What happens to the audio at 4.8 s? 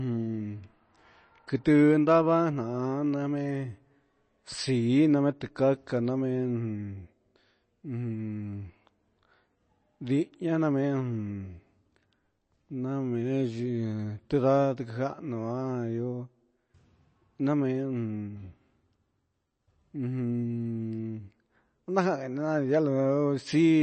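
At 4.8 s the speech carries the same damage heard across the whole clip, likely MP3 compression. Nothing is present above about 8.3 kHz, so the treble is cut at a fixed point. The sound is watery and swirly, with metallic chirps on s sounds and smeared attacks. Starved of bits, the encoder drops weak frequency lines, which flicker on and off from frame to frame. The damage is plainly audible and fits a low bitrate of around 32 kbps.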